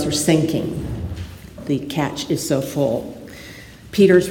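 Right near the end, from about 4.02 to 4.17 s, there's a short burst of hard clipping. The peaks in that stretch run roughly 2 dB past what the signal path can carry, so their tops get sliced flat. Those squared-off waveforms throw extra harmonics well up the spectrum, and since the overload is small you hear a brief crackly edge on the loudest moments rather than a sustained fuzz.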